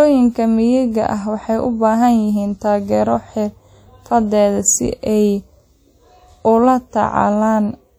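Speech throughout carries plainly audible ringing, washy smearing and a hiss that breathes with each syllable, likely WMA compression at a bitrate near 48 kbps. On a spectrogram, quantisation noise smears around onsets and weak harmonics drop out as gaps, with nothing above 20.1 kHz.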